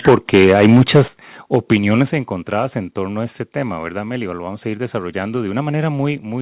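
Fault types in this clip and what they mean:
microphone overload: The input gain was likely set too high, so the loudest speech peaks overran the converter and were sliced flat. This happens from 0.07 to 1.01 s, about 10 dB over and with roughly 7% of samples clipped, and again from 1.54 to 1.75 s, about 3 dB over, just before "encontradas en torno a". The waveform shows flat-topped plateaus, and the spectrogram shows broadband smearing above the harmonics.
microphone volume stepped down: The call software likely reacted to the clipping by cutting the input gain in one jump, so voice and background fall together. The drops are about 3 dB at 0.09 s, about 8 dB at 1.08 s and about 5 dB at 2.1 s, just before "encontradas en torno a". The waveform envelope shrinks abruptly, and the whole spectrogram darkens at once.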